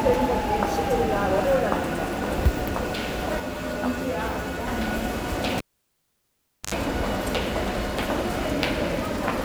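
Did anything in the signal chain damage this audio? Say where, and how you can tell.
Yes. From 3.40 to 4.67 s, channel delay (comb filtering) at the buffer stage: one channel lags about 10 ms, and mono summing leaves hollow, evenly spaced notches from around 40 Hz.

From 5.58 to 6.74 s, the analogue cable was pulled and plugged in: a pop, then 1.1 s of near silence, an 83 ms burst of 50 Hz buzz, and a second pop.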